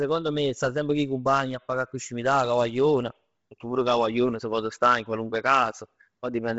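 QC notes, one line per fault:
Throughout, Bluetooth LC3 compression. The speech has nothing above about 7.7 kHz, so it sounds dull. The damage is heavy. Sibilants and breaths turn grainy and hissy, with a breathy edge on voiced sounds. This is likely LC3 coding at a low bitrate, which fits around 24 kbps with 7.5 ms frames. With so few bits, the codec drops much of the upper spectrum and fills the gaps with noise.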